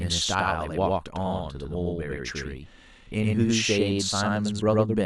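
From start to end, the speech carries a doubled audio track: a second full-band copy trails about a tenth of a second behind at roughly equal level, most likely from a slower capture path. It sounds like a dry slapback echo, and the waveform and spectrogram show every onset repeated.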